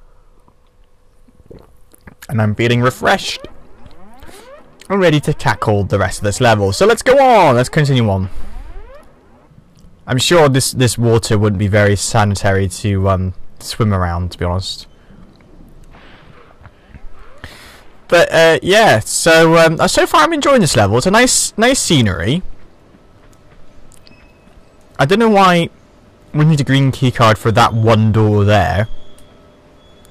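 Hard clipping occurs at 2.39–3.15, 4.93–8.12, 10.12–13.14, 13.81–14.04, 18.13–22.32, 25.01–25.63 and 26.39–28.80 s, with overdrive of about 5 to 15 dB. Peaks beyond the stage's limit are flattened, adding high harmonics. The milder passages crackle, while the heaviest, near 14–15 dB, turn into harsh fuzz.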